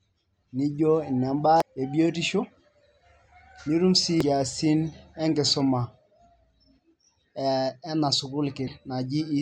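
At 1.60 s, 4.21 s and from 8.66 to 8.68 s, the speech breaks into a short chirp or blip, each lasting 20 ms or less. These are damaged data in a compressed stream: corrupted bytes left the decoder unable to read those frames, so it lost sync and hunted for the next valid header. On a spectrogram each appears as a thin vertical smear of broadband or oddly tonal energy. The waveform shows a brief spiky or malformed patch.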